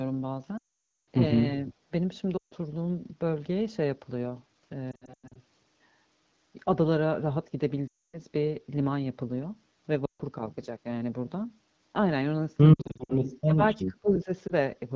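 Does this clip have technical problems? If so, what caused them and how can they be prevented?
Yes. Lost AMR speech frames occur at 0.57–1.07 s, 2.37–2.54 s, 4.91–5.42 s, 7.87–8.18 s, 10.05–10.21 s, 12.73–13.22 s and 14.48–14.54 s. These are frames corrupted on the radio link and rejected by the wideband decoder. It then repeats the last good pitch and spectral envelope at decaying gain. The 500 ms run near the start falls within two frames to near silence. The 140 ms and 260 ms gaps drop to near silence within two frames. At 4.91 s and 12.73 s the losses are scattered in short runs of up to 100 ms, which gives a broken warble, and the speech returns weak or rough after each gap. Better radio coverage, stronger channel coding or a lower-rate AMR-WB mode on poor links would reduce the frame errors.

Speech suppressed in double talk appears as short level drops of around 20 to 25 dB at 1.88–1.92 s, 13.45–13.62 s and 13.88–14.30 s. 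This is likely the echo canceller, which could not separate the near talker from loudspeaker echo while both sides spoke and so attenuated everything. A canceller with better double-talk detection and gentler suppression would prevent these dips.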